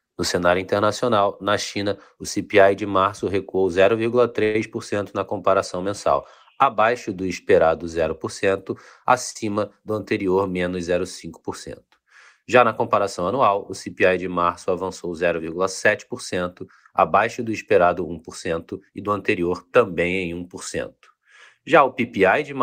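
From 4.43 to 4.56 s the speech hangs on a held, buzzy sound for about 112 ms before resuming with "na comparação mensal abaixo", with nothing skipped. This call audio freeze likely came from packets held up in transit, leaving the jitter buffer empty while the receiver stretched the last sound.

At 9.31 to 9.36 s a sound lingers about 47 ms too long, with a slight buzz, just before "do anterior menos". This short stall from a late packet happened because one packet missed its slot and the receiver extended the previous audio until it arrived.

From 12.96 to 13.47 s, and again from 17.71 to 19.40 s, the speech sounds hurried at an unchanged pitch. The first run plays at 108% speed, dropping roughly 50 ms. The second, between "abaixo do" and "também em", plays at 107%, dropping roughly 150 ms. Each is a jitter buffer speed-up, where the buffer held surplus audio and cut out short pitch-period pieces to reduce delay.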